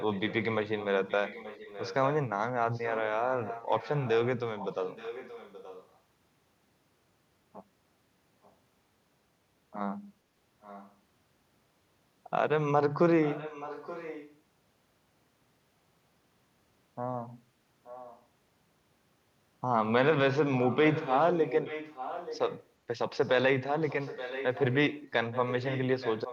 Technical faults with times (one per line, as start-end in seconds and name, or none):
0.00-5.99 echo leak
8.43-8.53 echo leak
10.61-10.96 echo leak
13.24-14.38 echo leak
17.84-18.25 echo leak
20.56-26.32 echo leak